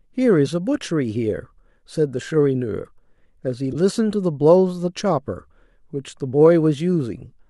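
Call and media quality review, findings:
Corrupt frame decoded, 3.72–3.75 s: brief chirp, blip or burst of noise in the speech, roughly one codec frame (about 30 ms). Probable component: decoder receiving a bit-damaged frame and playing it instead of concealing it. Misread gains or codes put energy in the wrong bands, peaking at about -15 dBFS. Spectrogram: short vertical smear of misplaced energy with hard edges on both sides. Waveform: a burst that doesn't follow the surrounding speech envelope.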